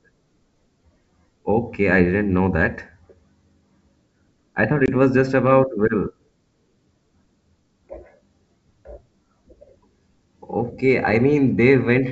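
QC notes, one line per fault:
4.86–4.89 s, packet loss on an ADPCM call: about one packet, some 20 ms, drops to a hard-edged silent hole. Unlike a plain dropout, the sound resumes slightly distorted because the decoder's predictor and step size have lost sync, settling within tens of milliseconds.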